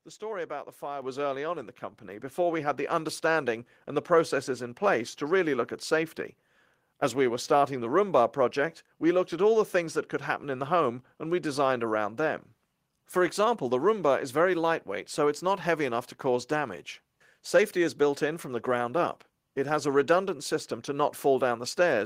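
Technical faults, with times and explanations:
1.02 s and 3.06 s, microphone volume stepped up: the call software decided the mic was too quiet and bumped its input gain in a single jump, about 6 dB then about 2 dB more, so speech and background get louder together, instantly.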